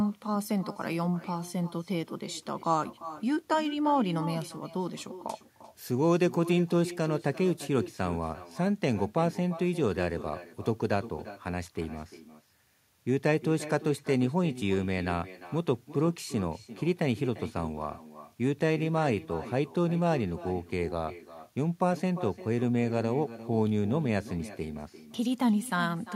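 Throughout, every phrase is shadowed about a third of a second later by a thinner copy roughly 14 dB down: echo with no canceller, the far-end loudspeaker feeding back into its microphone.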